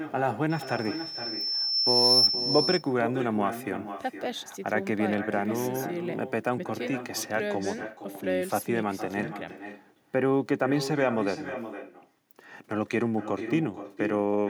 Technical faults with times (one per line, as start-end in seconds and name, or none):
0.00-14.49 echo with no canceller
0.50-2.35 loudspeaker feedback squeal